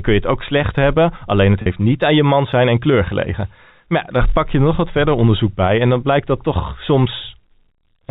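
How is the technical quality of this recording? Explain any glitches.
One glitch stands out. At 1.62 s the speech briefly hangs on a slightly buzzy, held tone. This is packet loss with pitch repetition: about 40 ms went missing, fitting two 20 ms packets, and the receiver looped the last pitch period to bridge it. The narrow telephone bandwidth, nothing above 4 kHz, comes from the G.711 coding.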